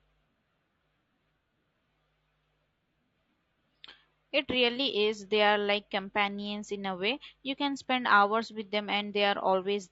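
Low-delay AAC compression runs throughout the speech, and the plainly audible damage likely comes from AAC-ELD at a rate that fits about 32 kbps. Its short frames resolve pitch harmonics poorly and spend bits quickly, leaving the voice rough and grainy.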